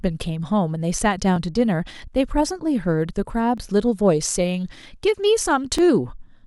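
A speech recording with clock drift buffer slips: about seven short clicks from 0.26 s to 5.79 s, spaced a steady 1.1 s apart. This is likely two devices whose clocks differ by roughly a tenth of a percent, forcing a few dozen samples to be dropped or repeated. The strict regular spacing sets it apart from random dropouts or packet loss.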